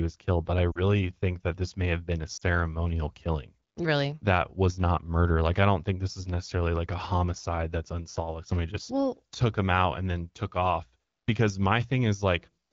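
Radio errors corrupted AMR speech frames twice, and the AMR-WB decoder covered each gap by repeating its last good pitch and vocal tract settings at falling gain. From 0.71 to 0.79 s, between "was killed but I" and "think that this may", and again from 2.37 to 2.44 s, just after "may have been a", the speech briefly smears and dips. Each gap fits two lost frames, about 40 ms. The surrounding wideband speech sounds clear, which fits a 12.65 kbit/s mode.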